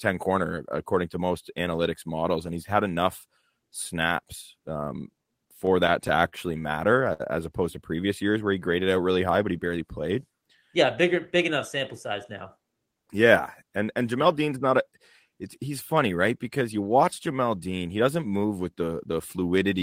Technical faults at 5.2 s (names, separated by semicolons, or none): repeated stalls (stutter)